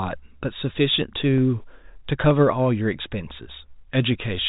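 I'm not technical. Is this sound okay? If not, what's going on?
No. There are two short clicks in this speech, at 1.38 s and 2.31 s. Each is a single sharp tick, over almost instantly. The likely cause is dropped samples. A tiny slice of the recording, a fraction of a millisecond, went missing. The sound then jumps straight to a later point, and that sudden jump makes the click. No speech is lost. The clip also has the narrow, phone-call quality of telephone coding.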